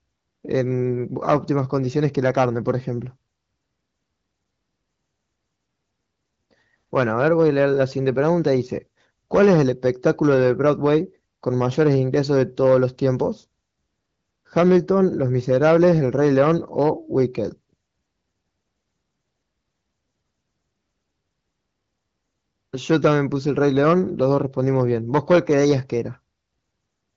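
Hard clipping occurs at 15.51 to 17.23 s and 23.63 to 25.73 s. Peaks overrun the stage by about 7 dB, are cut flat, and crackle.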